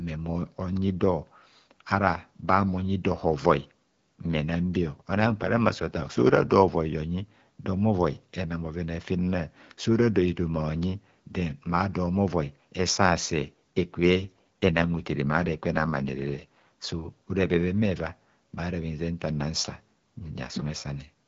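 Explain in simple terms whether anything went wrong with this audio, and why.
AMR rate drop, from 4.76 to 6.52 s and from 14.14 to 16.45 s: a weak phone link made the codec spend fewer bits on speech, so it briefly sounds rough and synthetic.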